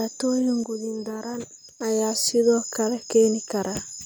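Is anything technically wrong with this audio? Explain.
Yes. From 0.64 s to 1.81 s, the speech and its background noise abruptly drop together by about 6 dB, then snap back to full level just before "ayaa sidoo kale". This sudden gain jump is likely a digital gain change applied between samples without any ramp.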